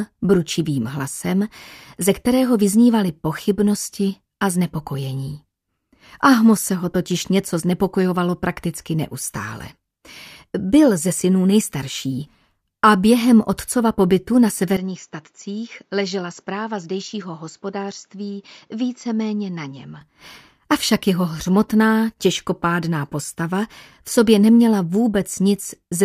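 At 14.77 s the sound abruptly turns duller and roughly 10 dB quieter, with nothing above 7.6 kHz and a faint new background noise, until 20.01 s. This is likely an input switched to a poorer device, with no gap at the changeover.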